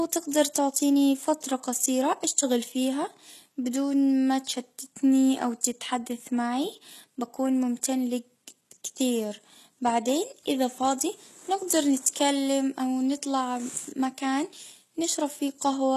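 Throughout the speech, s sounds come out gritty and lispy, and the treble has a synthetic sheen whose harmonics don't line up with the body of the sound, while nothing at all reaches above about 12.3 kHz. This is likely HE-AAC compression at a rate that fits roughly 16 kbps, with the upper band rebuilt by spectral band replication from copied lower bands. That rebuilt but false brightness sets it apart from a plain low-pass, which would simply sound dull.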